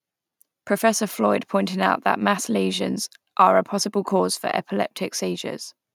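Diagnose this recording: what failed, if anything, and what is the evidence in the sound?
Nothing failed; no fault is audible in this recording.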